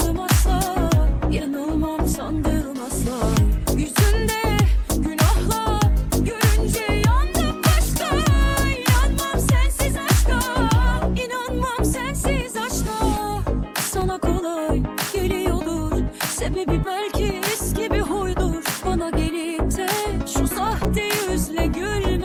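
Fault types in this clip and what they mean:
Repeated buffer at 14.01 s and 20.84 s: each time, fresh audio failed to reach the output in time, so the device replayed its most recent block of samples. A fragment only about 5.33 ms long sounds three times in a row, with hard joins between repeats, which fits a 256-sample buffer. Because the repeated block is so short, it comes across as a brief click or buzz rather than a stutter, and roughly 10 ms of sound is lost.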